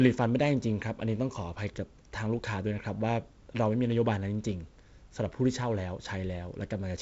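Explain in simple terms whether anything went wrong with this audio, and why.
Nothing went wrong; this is ordinary wideband phone speech.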